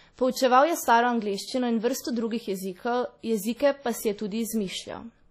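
Throughout the speech there is a washy, ringing smear with a hiss that breathes with the signal, and nothing above 16.2 kHz, likely heavy WMA compression at a low bitrate near 32 kbps. Unlike steady background hiss, this noise rises and falls with the speech.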